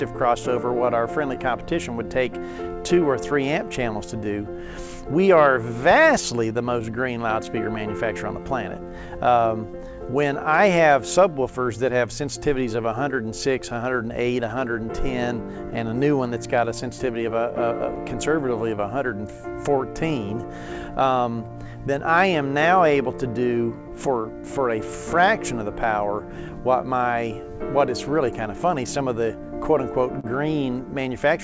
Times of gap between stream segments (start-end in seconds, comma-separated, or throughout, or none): none